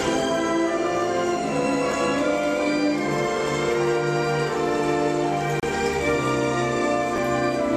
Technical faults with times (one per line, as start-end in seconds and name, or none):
1.91-1.93 chunks out of order
5.60-5.64 Bluetooth stall
7.16 chunks out of order